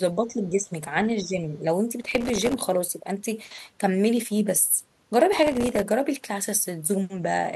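Speech, with two kinds of fault. From 0.17 to 0.71 s and 0.98 to 1.43 s the voice dips by about 10 dB, likely speech suppressed in double talk as an echo canceller turned down near-end speech. A spectrogram shows the bands fading, and the waveform envelope sags. From 2.01 to 2.54 s and 5.33 to 5.82 s, processor overload crackle produces dozens of tiny silent gaps, each roughly 1.5 ms long, which fits a very small buffer. These appear as dense vertical broadband streaks on a spectrogram and as hard-edged dropouts to near silence in the waveform.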